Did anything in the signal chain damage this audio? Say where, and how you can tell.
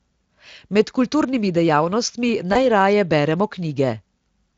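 Yes, at the network stage. Between "kulturnimi dejavnostmi" and "najraje beremo", from 2.53 to 2.56 s, there is VoIP packet loss concealed by the speech codec. The speech briefly smears into a short, fading extension of the preceding sound. That points to a single lost 20 ms frame. The decoder filled the gap by repeating its last pitch and spectral shape at falling gain. Speech then takes a moment to regain full strength, over the light hoarseness of the Speex encoding.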